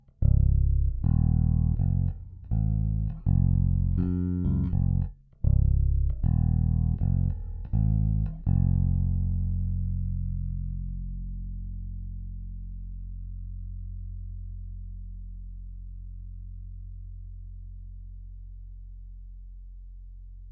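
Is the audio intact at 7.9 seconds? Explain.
No. At 7.9 seconds, as throughout the whole clip, the audio has a wrong sample rate fault. Samples captured at 22 kHz are being played back at 16 kHz with no rate conversion, so everything runs at about 0.73 times its proper speed. Pitch drops by the same ratio, roughly 5.5 semitones. The sound at that moment is low, slowed and dragging, with its timing and tone shifted together rather than distorted or broken up.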